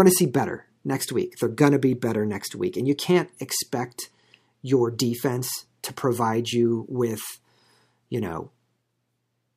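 No technical faults can be heard anywhere in the recording. Nothing in the speech points to a problem in the chain that captured or delivered it.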